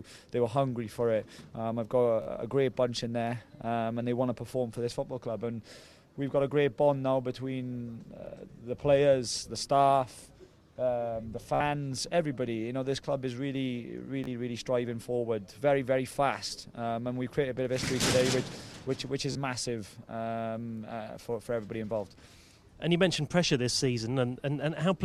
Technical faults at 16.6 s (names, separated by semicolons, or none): Bluetooth stutter